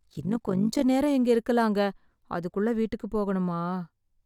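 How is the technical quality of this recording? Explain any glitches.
The recording has one clear fault at the start. From 0.0 to 0.84 s there is overlap-add ripple: the speech was split into overlapping windowed frames and rejoined with windows that don't sum to constant gain, so level swings by about 11 dB once per frame, around 50 times a second, giving a rough flutter.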